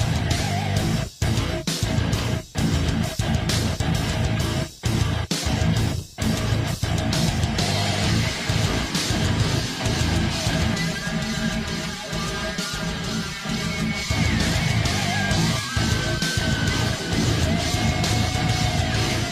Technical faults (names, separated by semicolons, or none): channel delay (comb filtering)